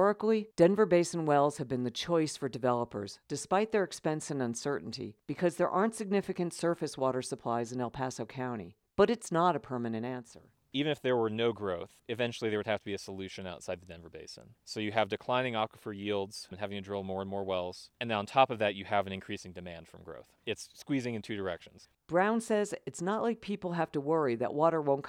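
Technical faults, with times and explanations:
Nothing technical stands out here: the speech comes through without any faults to point at.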